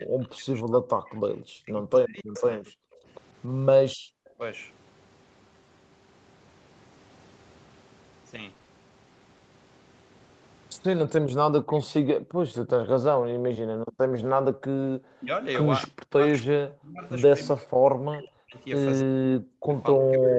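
From 0.0 to 4.41 s the speech dips, by as much as about 40 dB, for roughly two seconds in total. This is likely speech suppressed in double talk: the echo canceller mistook the talker for loudspeaker echo.

At 0.63–0.65 s one lost packet was rebuilt from error correction. That 20 ms frame sounds briefly rougher and noisier.

From 1.1 to 2.71 s a faint copy of the voice trails 290 ms behind, about 15 dB down. This is likely an echo leak from an incompletely cancelled loudspeaker.

Between 2.94 and 4.09 s the background is gated by the echo canceller. The room sound drops out by about 40 dB, for roughly 0.3 s in total.

From 8.41 to 8.69 s repeated packet loss creates robotic sound. There are four 20 ms gaps, and about a third of the span is patched, which leaves it choppy.

From 11.04 s to the end, the speech again dips by up to about 40 dB. This is likely speech suppressed in double talk.

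At 11.27 s another single packet was rebuilt from error correction, adding a brief rough patch.

From 11.75 s to the end, the delayed echo returns, again 290 ms late and about 15 dB down. This is likely an echo leak.

At 14.52–14.63 s the background is gated once more, dropping about 40 dB for 0.1 s.

At 16.37–16.43 s two packets were rebuilt from error correction. That 40 ms of audio sounds noisier and rougher.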